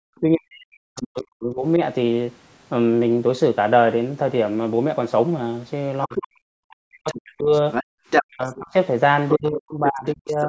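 Speech suppressed in double talk runs from 0.0 to 1.8 s and again from 6.06 s to the end, with the talker's level dipping and breaking up by as much as roughly 40 dB while another voice is present. The cause is likely an echo canceller that could not tell the near talker from the loudspeaker signal during overlap and pulled the whole microphone feed down, which costs about one and a half seconds early on and around three seconds in the later stretch. Other side's voice leaking through appears at 0.96 to 1.07 s, 6.02 to 8.59 s and 9.87 to 10.45 s. A second voice is audible under the talker, faint at first (about 15 dB below the speech), then about as loud as the speech in the long middle stretch, and about 10 dB down near the end. This is likely loudspeaker playback on the talker's device that the canceller failed to subtract fully from the microphone, so residual far-end speech survives. 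Background gated by the echo canceller shows up from 7.84 to 7.93 s, where the room sound drops by about 40 dB for roughly a tenth of a second and then returns. The canceller clamped the microphone hard while the loudspeaker was active, cutting the ambience along with it. The call's microphone processing, which limits content to below 8 kHz, is part of the chain.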